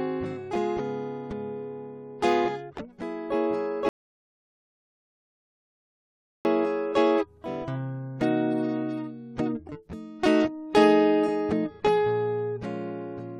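A rebuffering stall runs from 3.89 to 6.45 s: playback starved of downloaded data, the music drops to silence, then resumes exactly where it stopped, adding 2.56 s.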